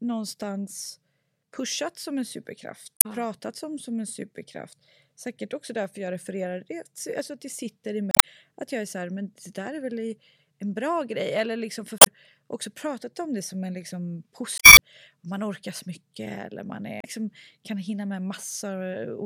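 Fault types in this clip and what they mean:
Damaged data in a compressed stream: corrupted bytes make the decoder misread frames and lose sync until it finds the next valid header, so the speech breaks into short squawks or blips at 2.97, 8.11, 11.98 (after "liksom för"), 14.57 (after "det som en liksom") and 16.99 s, lasting 0.06 to 0.22 s. A spectrogram shows brief broadband smears or vertical blocks cutting across the speech harmonics; the waveform shows abrupt, misshapen bursts or discontinuities.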